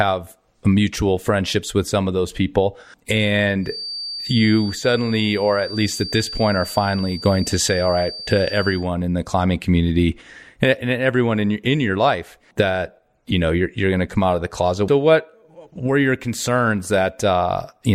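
From 3.59 to 8.89 s, a 4.6 kHz feedback whistle sits under the speech, likely a near-feedback speaker-microphone loop; its wavering level distinguishes it from steady electrical tones.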